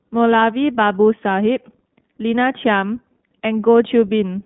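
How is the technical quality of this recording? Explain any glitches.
Quality's held back by the codec, with one brief glitch. The whole clip runs through the iLBC codec, passing only about 150 Hz to 3.6 kHz; the plainly audible, slightly synthetic roughness points to its 15.2 kbps mode. At 0.41 s there's a lost iLBC frame: the decoder repeats the last pitch cycle with some noise, giving a short buzzy hold before the speech snaps straight back.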